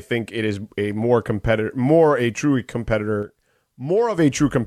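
At 3.23 s the speech and its background noise drop together by about 6 dB in a single step, then return to the earlier level at 4.18 s. This sudden gain jump is likely a digital gain setting applied from one sample to the next with no ramp. On the waveform the envelope abruptly halves and later doubles back. On a spectrogram every band, including the noise floor, darkens evenly between two sharp vertical edges.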